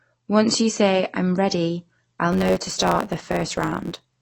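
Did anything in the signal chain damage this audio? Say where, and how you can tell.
Yes. Throughout the clip the speech is dull and smeared, with a warbly, fizzy edge on sibilants and a lowered top end. This is likely AAC compression at the codec stage. The hard band limit and the smeared texture fit AAC-LC at a low bitrate, something like 32 kbps, where the encoder lowers its cut-off and quantises the remaining frequency lines so coarsely that the damage is plainly audible.

From 2.32 s, right after "say i'm ready I'll", to the end of the clip at 4.22 s, a steady 100 Hz buzz appears and the speech runs about 1.07 times fast with its pitch roughly unchanged. That is a block size mismatch (truncated) at the driver or buffer stage. One stage writes blocks, consistent with 512 samples, and the next reads fewer, so each block's tail is discarded. The buzz comes from those cuts at the block rate, and the dropped material speeds the speech up.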